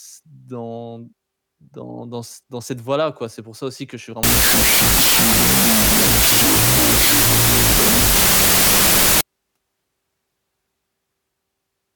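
Samples written as 32-bit floats are read as 16-bit integers from 4.23 to 9.21 s, after "aussi que je suis": a wrong sample width, so the speech sits buried in loud noise at half speed.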